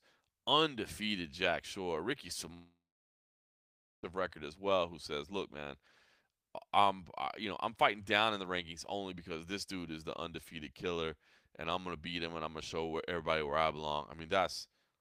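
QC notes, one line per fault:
2.53–4.06 s, long network dropout: a brief fading tail, then 1.27 s of silence; returns at "record as well who" with 1.5 s likely lost in transit.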